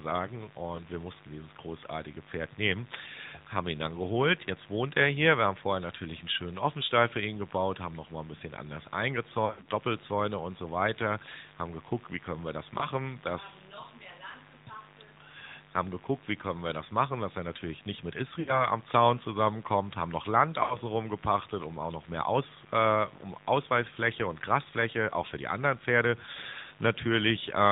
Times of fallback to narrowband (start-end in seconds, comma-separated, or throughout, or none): none